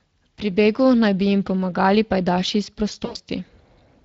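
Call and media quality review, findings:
Speex codec, whole call: low-bitrate CELP encoding starves the excitation, consistent with a roughly 20 kbps mode. Speech throughout sounds plainly degraded, noisy and hoarse.

VoIP packet loss concealed by the speech codec, 3.05–3.17 s: about 100 ms of packets missing, which fits five 20 ms frames. The decoder extrapolates the last pitch and filter with falling gain, so speech smears into a fading buzzy, coloured tone and stays weak briefly after recovery.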